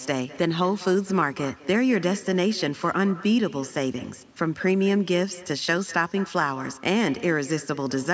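Echo with no canceller runs throughout: a loudspeaker at the far end feeds back into its microphone, returning each phrase roughly a fifth of a second later, about 19 dB quieter and thinner.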